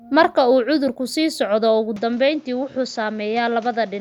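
Speech, with an abrupt change in sound at 1.96 s that lasts to the end. Nothing remains above 7.6 kHz. The level drops about 5 dB. A new noise floor sits roughly 30 dB down. There is no gap. The input likely switched to a poorer device.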